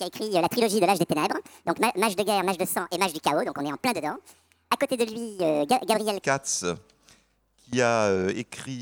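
From the start to 6.22 s, a section at the wrong speed plays 1.67 times fast, pitched roughly ten semitones high and hurried, likely from a clock mismatch.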